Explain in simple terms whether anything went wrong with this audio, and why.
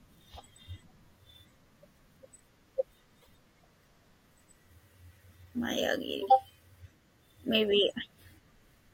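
A broken MP3 bit reservoir, from 3.21 to 3.29 s, makes the speech skip ahead. MP3 frames store some data in earlier frames. Here some frames were likely cut out, so the next few decoded borrowed bytes wrongly.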